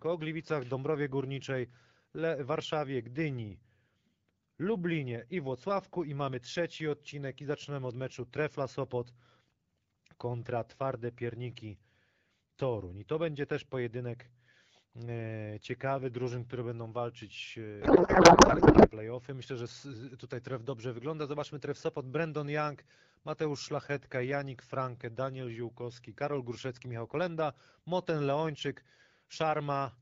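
Speech carried over AMR wideband (HD Voice) at 12.65 kbit/s, with light codec smoothing, breaks down after "drużyn które będą walczyć". From 17.82 to 18.91 s, a codec payload misread replaces the speech with garbled, warbling noise that barely tracks it. The pattern fits octet-aligned AMR being unpacked as bandwidth-efficient, shifting every field. On a spectrogram, harmonic structure gives way to smeared broadband texture; the waveform's envelope stops following syllables for that second.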